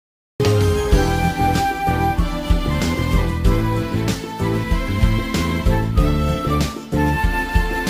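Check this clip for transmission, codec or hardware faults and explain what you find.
One fault, a cut-off start. The clip opens on digital silence until 0.40 s, where sound appears abruptly in mid-flow, with no attack or fade-in. The capture or stream began late, so the beginning of that sound was never recorded.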